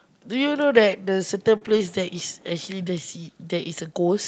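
A brief smear at 1.57 to 1.63 s in this speech recording makes the sound waver and blur for a moment, with a short consonant possibly lost. This is short concealed packet loss: about 40 ms of audio never reached the decoder in time, and the receiver covered roughly 33 ms of it by extending the preceding sound, as a pitched continuation for voiced sound or as shaped noise otherwise, before blending back into the real signal. Overlapping that, from 1.61 to 1.87 s, the speech turns grainy and noisier in short separate patches, about 140 ms of it in total. This is lost packets rebuilt from error correction, which fits seven separate 20 ms packets. Each one was replaced by the low-bitrate copy that Opus in-band forward error correction tucks into the following packet, so nothing goes silent, but those frames are coarser. The call itself runs over Opus at 32 kbps, with audio bandwidth reaching 8 kHz.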